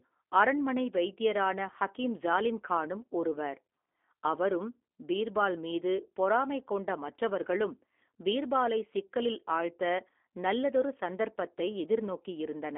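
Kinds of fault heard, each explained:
G.729 codec: low-rate speech coding rebuilds the voice from a vocal tract filter and sparse pulses, leaving plainly audible roughness, nothing above about 3.6 kHz, and a narrow line band.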